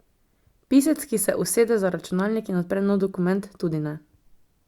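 No technical faults are audible.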